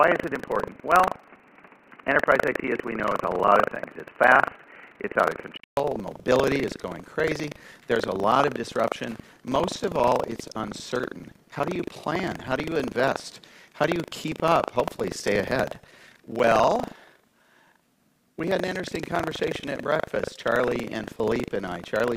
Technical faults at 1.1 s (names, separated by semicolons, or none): buffer tearing; input switched to a poorer device